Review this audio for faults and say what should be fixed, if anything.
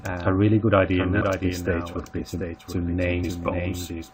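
Doubled audio track: a full-band copy of the whole clip trails the original by about 0.7 s, roughly 5 dB quieter, with no decay or room colour. It's likely a second capture through a slower path or an edit holding two copies out of step. To prevent it, make sure only one capture path or one copy of the audio reaches the mix.

Compressed frames skipped: at 1.20 s and again at 3.23 s the sound jumps ahead by roughly a fifth of a second. Each gap fits about ten frames of 21.3 ms that were missing from the file or rejected by the decoder as damaged. To prevent it, check file integrity after transfer and re-encode or re-fetch from a clean source.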